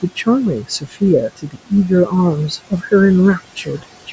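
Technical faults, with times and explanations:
Throughout, noise suppressor artifacts: the room noise, about 12 dB under the speech, is pushed down about 20 dB between phrases.
0.01–0.28 s, 0.55–1.02 s, 1.29–1.72 s, 2.49–2.93 s, 3.56–3.84 s, speech cut by the noise suppressor: it mistook soft speech for noise. Parts dip about 17 to 22 dB and sound swallowed.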